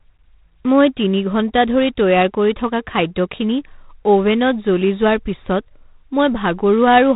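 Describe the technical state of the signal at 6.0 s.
At 6.0 s the speech is still passing through G.726 ADPCM coding, as it does for the whole clip. The codec sends only a few bits per sample describing how far the signal strays from an adaptive prediction, and the coarseness here fits the 24 kbit/s mode. Nothing above about 3.8 kHz survives, so the speech sounds muffled and telephone-like, and a harsh, rasping hiss rides on it, swelling and fading with the speech level.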